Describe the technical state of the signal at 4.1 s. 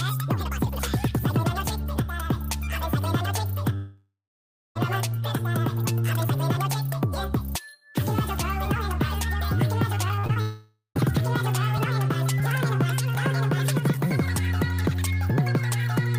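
At 4.1 s the audio sits inside a long network dropout from 3.75 to 4.77 s, likely caused by lost packets. The receiver extends the last sound as a fading buzz, then 0.62 s of near-silence follows. Unlike a brief packet glitch, it decays to quiet before resuming.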